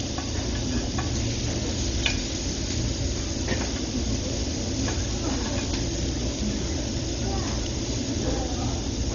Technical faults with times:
0.00-9.14 Dolby Digital compression

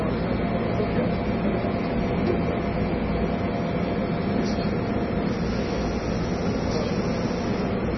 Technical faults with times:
0.00-7.97 MP3 compression

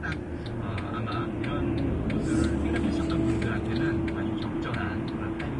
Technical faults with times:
0.00-5.59 Vorbis compression

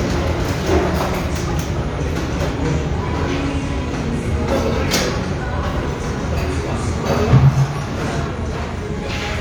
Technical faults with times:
none

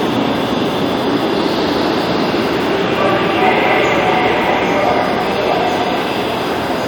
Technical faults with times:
5.16 compressed frames skipped

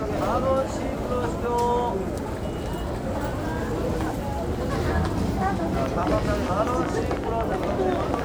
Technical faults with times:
5.86-8.20 train of clicks

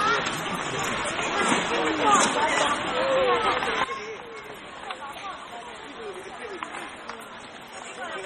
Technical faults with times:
0.00-8.25 MP3 compression
3.84-8.25 sudden gain jump

